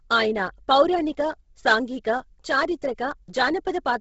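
Throughout the speech, the audio most likely passed through Bluetooth LC3 compression at a starved bitrate, with damage consistent with roughly 16 kbps and 10 ms frames. The encoder discards most of the upper spectrum and substitutes synthetic noise where detail used to be. Nothing survives above 7.7 kHz, so the top end is dull, while the noise filling adds a heavy breathy, grainy coating to the voice.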